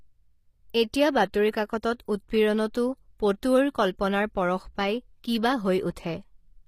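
From start to finish the top end sounds synthetic: s sounds come out gritty and lispy, and nothing survives above 15.5 kHz. That's likely HE-AAC compression, with the treble rebuilt from copied lower bands, which fits a low bitrate around 24 kbps.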